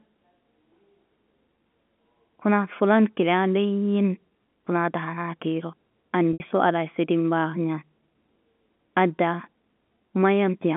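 Speech carried over a telephone line, with G.711 coding audible as a band of roughly 150 Hz to 3.5 kHz. At 6.33 to 6.40 s there is packet loss with pitch repetition: about 70 ms of audio went missing, which fits seven 10 ms packets. The receiver bridged the gap by looping the last pitch period, producing a brief held, buzzy tone that fades away. On a waveform this shows as identical repeating cycles that shrink in amplitude. On a spectrogram it appears as flat, unchanging harmonic lines where the speech harmonics would normally bend.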